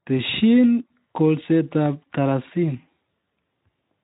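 No technical faults are present: the speech carries only the mild coding texture of a Speex link working as expected, with its content ending at about 3.8 kHz.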